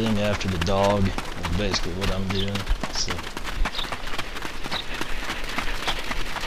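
From 4.53 s to 5.78 s the audio abruptly slows by 5.7% and drops about 102 cents, roughly a semitone flat, then snaps back to normal speed and pitch. This is heard as a drift correction step, most likely from clock-matching software that briefly lowered the playback rate to refill its buffer. On a spectrogram, every harmonic line steps down by about 6% at 4.53 s and jumps back up at 5.78 s. The waveform shows the same stretch in time.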